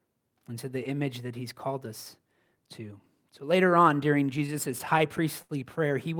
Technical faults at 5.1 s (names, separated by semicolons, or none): repeated stalls (stutter)